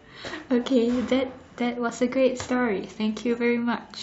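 No technical faults can be heard anywhere in the recording; the signal stays continuous and stable throughout.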